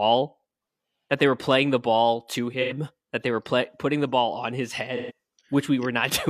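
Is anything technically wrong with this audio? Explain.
Yes. The speech has AAC frame loss with concealment at 2.61–2.73 s and 4.96–5.12 s. About 85 ms and 128 ms of audio are missing, consistent with two and three lost frames. The decoder fills each gap from the last good spectrum, leaving a brief smeared, noisy, phasey patch.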